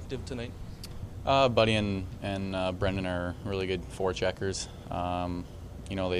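Nothing stood out as a technical problem on listening to the clip.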